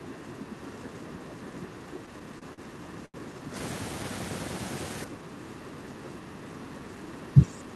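From 0.0 to 3.55 s and again from 5.06 s to the end, speech suppressed in double talk is the likely cause of the level dips: the echo canceller, unable to tell the near talker from loudspeaker echo, pulls the speech down by as much as about 10 dB, for roughly three seconds in the first stretch.

Between 1.99 and 2.61 s, repeated stalls (stutter) set in as late packets let the jitter buffer drain six times. Each hole is bridged by extending the previous sound, about 102 ms in all and at most 40 ms at once, so nothing is lost but the speech drags and judders.

At 3.06 to 3.17 s, a short stall from a late packet occurs: playback delay jumps by 82 ms, and the last sound is stretched to cover it before the speech resumes where it left off, leaving a sound held too long.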